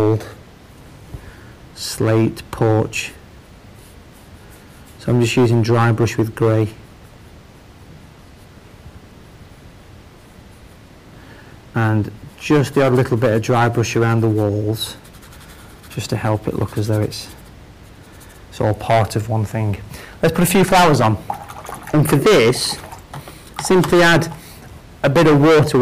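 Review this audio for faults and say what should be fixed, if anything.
Hard clipping runs through the whole clip. The signal reaches a stage about 20 dB hotter than it can pass, so every loud peak is cut flat and a harsh fuzz sits on all the louder passages, with around one sample in twenty pinned at the limit. On the waveform the peaks show as flat-topped plateaus. On a spectrogram each loud moment smears into bright vertical bands of added harmonics reaching far up the spectrum. To prevent it, reduce the gain ahead of the overloaded stage so peaks stay below full scale, and leave headroom or use a limiter.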